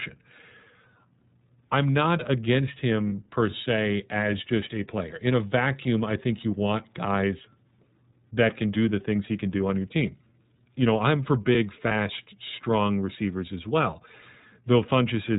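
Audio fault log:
throughout: iLBC codec. The speech is band-limited, with nothing above 4 kHz, so it sounds narrow and muffled. Each 30 ms frame's excitation is coded on its own, which leaves a rough, slightly synthetic edge on the voice. The damage is plainly audible across the whole clip. The band limit and grain fit iLBC's 13.33 kbps mode with 30 ms frames.
3.09–3.12 s and 11.87–11.92 s: lost iLBC frames. The first gap comes just after "I'm not against". The second comes just before "strong receivers as well". Each covers about one 30 ms frame of missing audio. The decoder fills the hole by repeating the last pitch cycle mixed with noise. This produces a brief held, buzzy vowel-like sound. Because iLBC frames stand alone, the voice recovers clean right after each gap.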